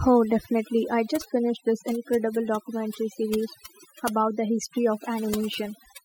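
Throughout the speech, the background drops to near silence scattered with twinkling specks. This is overdone noise removal: the reduction was set so strong that bands near its noise estimate were pushed down or off, quieter voice detail included.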